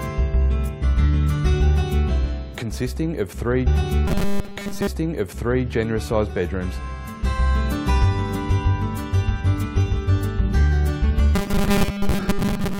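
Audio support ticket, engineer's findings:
Stream segment repeated, 3.66 to 5.65 s: about 2.0 s of audio plays again, with a small blip at the jump back. Player fetched or queued the same segment twice.

Robotic sound from repeated short buffers, 4.08 to 4.87 s and 11.36 s to the end: rigid metallic buzz at 200 Hz, with most of the real audio skipped. Likely a starved buffer looping its last 5 ms.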